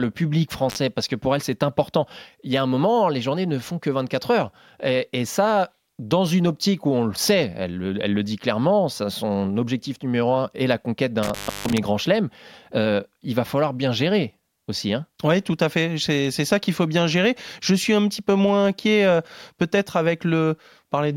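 At 0.69 s the speech drops out briefly in an intermittent contact fault. The line opens for about 41 ms, just before "parce que pour elle". A loose cable or plug breaks the signal path for a moment. The sound vanishes, with crackle at the edges and faint hiss in the gap. A longer dropout follows from 11.23 to 11.78 s. It sits between "un est la conquête" and "grand chelem euh il". Here the line stays open for about 295 ms.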